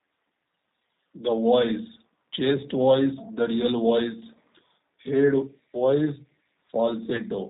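From the start, the speech carries plainly audible G.729 codec damage. Sound above 4 kHz is gone. The voice rebuilt at 8 kbit/s sounds rough and slightly synthetic.

From 7.16 to 7.22 s, there is VoIP packet loss concealed by the speech codec. About 20 ms of audio went missing. The decoder stretched the last sound into a fading buzzy tone or coloured noise, and the voice stays weak briefly afterwards.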